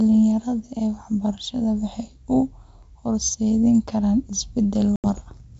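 At 4.96 s the speech drops into a hard-edged silent gap until 5.06 s. This is packet loss on an ADPCM call. About 80 ms, roughly four packets, went missing on the G.722 link. The decoder's predictor and step size lost track of the sender's. Speech returns slightly distorted. It settles within some tens of milliseconds.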